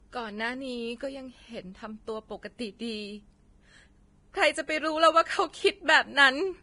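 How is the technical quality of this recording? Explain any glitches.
The recording has one technical problem, present throughout. It is low-bitrate audio saved at a high bitrate. The speech is dull, with nothing above 10.6 kHz. This likely comes from a heavily compressed earlier version re-encoded as high-rate MP3, which cannot restore the removed detail.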